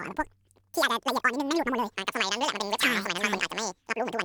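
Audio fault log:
Throughout: audio read two samples at a time (double speed). The speech runs twice as fast and a full 12 semitones higher because each pair of samples is taken as one frame.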